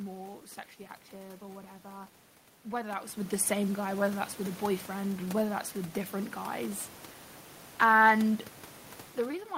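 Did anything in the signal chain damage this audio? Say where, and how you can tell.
No, nothing in the signal chain damaged this audio.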